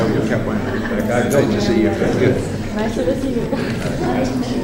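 No technical faults can be heard in this audio. Nothing in it calls for a timestamp or a closer look.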